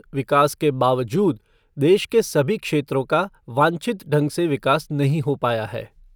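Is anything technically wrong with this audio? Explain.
Yes. Sample clock jitter runs through the whole clip. The converter's clock wobbles by under a microsecond, so samples land slightly off time. The error sits about 45 dB below the speech. It adds a faint hiss on loud, bright sounds and disappears in pauses.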